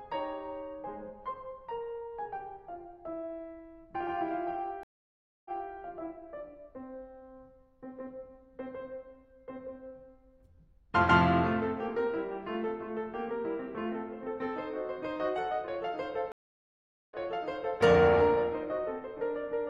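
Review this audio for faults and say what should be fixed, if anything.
Two stream reconnects break the music: at 4.83 to 5.73 s, about 0.62 s of silence, then playback resumes 0.28 s earlier; at 16.32 to 17.81 s, about 0.79 s of silence, resuming 0.70 s earlier. Each time the connection dropped and a fresh decoder restarted mid-stream. Unlike a plain dropout, the audio repeats material after the gap rather than skipping ahead. A larger client buffer with seamless session resumption at the last played position would prevent both.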